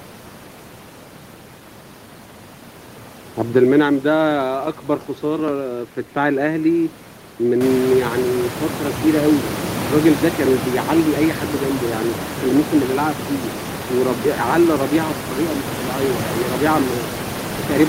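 Nothing goes wrong technically here; the only thing worth a mention is the room's own background noise, which climbs by about 15 dB somewhere around seven and a half seconds in and then sits roughly 9 dB under the speech, and that's just part of the space the recording was made in.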